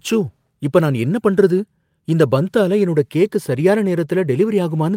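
At 3.59 to 3.61 s the speech shows a lost packet rebuilt from error correction: a 20 ms stretch, which fits a single lost packet, was filled from the low-bitrate copy carried in the next one. There is no gap, just a brief rougher, noisier patch, seen as a smeared, grainier block in the spectrogram with no dropout in the waveform.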